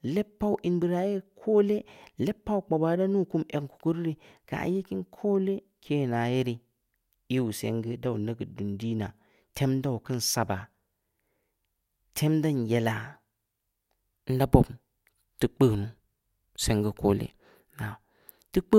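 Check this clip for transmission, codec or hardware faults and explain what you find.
Nothing here to flag: I listened for trouble in the transmission, the coding and the hardware along this speech recording's path and didn't hear any.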